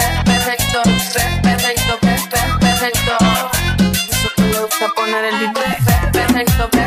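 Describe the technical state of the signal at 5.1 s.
At 5.1 s the signal is intact, with no technical fault present at that moment.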